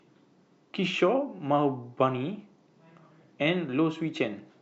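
No dropouts, clicks, distortion or other faults turn up anywhere in this speech recording.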